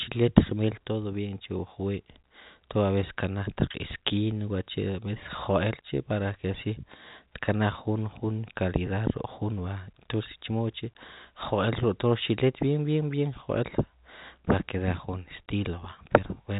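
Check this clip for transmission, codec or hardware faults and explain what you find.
No transmission, codec or hardware faults turn up anywhere in this speech recording. It has passed through G.711 mu-law telephone coding at 64 kbps, which accounts for the narrow telephone bandwidth with nothing above about 3.8 kHz.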